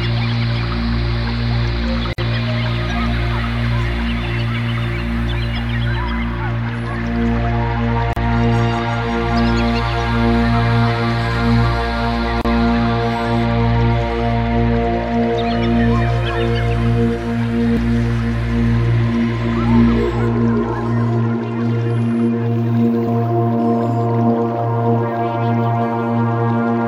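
The audio has three brief dropouts, each a gap at a join of encoded pieces: 2.13 s (52 ms), 8.13 s (34 ms) and 12.41 s (34 ms). Separately encoded segments were spliced untrimmed, leaving encoder delay and padding as silence.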